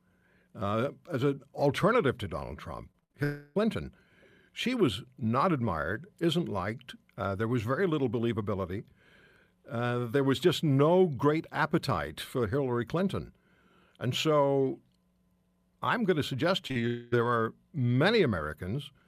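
From 2.91 to 3.16 s, repeated packet loss chops the speech. Four gaps occur, the longest 60 ms, and half that span is patched by continuing the previous sound. It turns choppy, with pieces missing.

At 3.24 to 3.57 s, about 0.32 s is replaced by a stretched continuation of the last sound, with no true silence. A long network dropout is the likely cause. The original audio never returns for that stretch.

Just after "I'm going to suggest", short concealed packet losses follow back to back. The first, at 16.67 to 16.72 s, loses about 20 ms. The second, at 16.72 to 16.77 s, loses about 40 ms. Each hole is filled from the preceding sound, giving a brief smear.

At 16.87 to 17.14 s, a second likely long network dropout hides about 0.24 s under a continued extension of the prior sound. It ends just before "there are".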